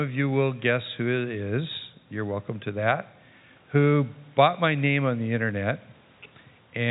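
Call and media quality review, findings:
No faults found in audio.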